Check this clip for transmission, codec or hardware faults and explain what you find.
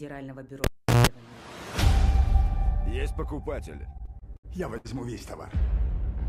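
Two faults are audible: a cable pulled and plugged in near the start, and repeated stalls (stutter) later on.

From 0.64 to 1.07 s, a cable is pulled and plugged in. A pop marks the break. The sound then drops to near silence for about 380 ms. As the plug goes back in, only the tip touches at first. That picks up mains hum, heard as a 60 Hz buzz lasting about 160 ms. A second pop follows as the sound returns.

From 3.77 to 5.55 s, the audio shows repeated stalls (stutter). There are about ten hitches across this span. Packets arrived late or too slowly, so the jitter buffer kept running dry. Each time, the receiver stretched the last sound to cover the wait. The longest pause is about 72 ms. In total about 251 ms is filled this way, roughly 14% of the span. Nothing is lost, but the sound drags and stutters.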